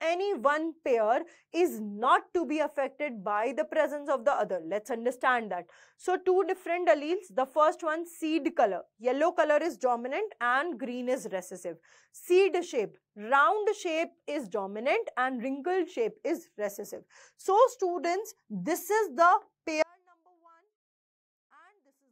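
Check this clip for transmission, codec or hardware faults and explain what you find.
One fault is present. An audio dropout to a faint residue starts at 19.8 s and runs to the end: the signal likely lost its feed while the path stayed live, leaving a faint leak around 35 dB down.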